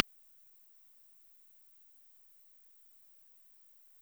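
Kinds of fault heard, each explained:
Dropped buffer (overrun): Two brief skips, at 0.73 s and 2.9 s, where the sound jumps straight ahead with no silence. Each time a tiny slice, under two milliseconds, is missing. The likely cause is samples overwritten by the hardware before the program read them.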